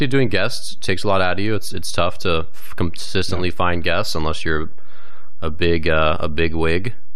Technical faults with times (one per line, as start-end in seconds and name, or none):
0.00-7.16 DC offset